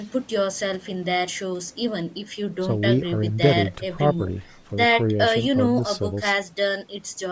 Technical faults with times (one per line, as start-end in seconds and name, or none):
0.00-7.31 Bluetooth LC3 compression